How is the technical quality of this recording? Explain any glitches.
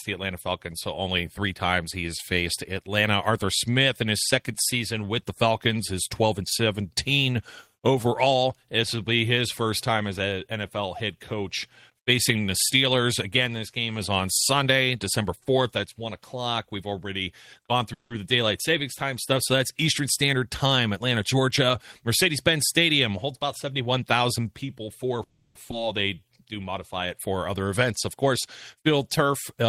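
The recording has several network-related glitches, all in the second half, where the call's jitter buffer struggles to keep playback steady.

From 17.93 to 18.12 s, and again from 25.23 to 25.57 s, there is a call audio freeze. The sound stalls, continues briefly as a fading tail, then drops out: about 100 ms of silence in the first case and about 60 ms in the second. The likely cause is held-up packets that drained the jitter buffer, leaving the receiver to fill 170 ms and then 320 ms. When the audio resumes, it picks up exactly where it stopped. Unlike a skip, nothing is lost; the speech is just pushed later.

Between 20.00 and 21.49 s, and between 23.09 and 24.39 s, comes a jitter buffer speed-up. The speech runs about 4 percent fast and then about 6 percent fast, with unchanged pitch, so the second stretch sounds hurried rather than higher. The receiver trims tiny pitch-period slices, around 70 ms in total each time, to shrink an overfull buffer. 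This differs from a skip ahead, which removes one chunk in a single abrupt cut rather than many small slices.

At 25.71 to 25.74 s, just after the second freeze, there is a skip ahead. Playback jumps forward and roughly a fifth of a second of speech disappears, with the two sides joined almost seamlessly. The stretch was dropped while later speech was already waiting. That is the opposite of a freeze, which delays the speech but keeps all of it.

From 26.15 to 26.46 s there is a jitter buffer slow-down. Speech plays at about 85 percent speed at its normal pitch, with about 54 ms added by repeating single pitch periods to rebuild the buffer's reserve. It sounds drawn out, which separates it from a freeze: the sound keeps moving instead of stalling into a tail or a silence.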